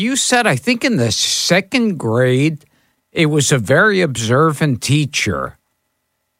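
No technical faults are audible anywhere in this speech.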